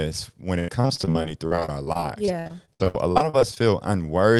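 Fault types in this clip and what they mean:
Repeated packet loss (robotic sound): from 0.59 to 3.58 s the speech keeps breaking up as 28 packet gaps follow one another, each patched by stretching the previous sound, the longest about 87 ms; the spectrogram shows smeared, repeated harmonic slices and the waveform shows choppy, flattened stretches.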